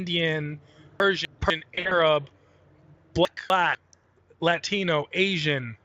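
Chunks out of order occur from 1.0 to 1.5 s. A 250 ms block of speech arrived one chunk late and plays after the block that should follow it. Nothing is missing, but the two quarter-second pieces run in swapped order, giving a jumbled moment with three hard joins.

VoIP packet loss concealed by the speech codec follows at 1.75 to 2.0 s. About 120 ms of audio went missing in gaps scattered over 160 ms, with the longest gap lasting 60 ms. The gap pattern fits 20 ms frames. The decoder filled each gap by extending the last pitch and spectral shape at falling gain, so the speech smears into a buzzy tone or coloured noise that fades. The sound stays weakened briefly after the lost stretches end.

Chunks out of order occur again from 3.25 to 3.75 s, with the same one-chunk lateness on 250 ms blocks. The swapped pair scrambles that half-second and leaves three hard joins.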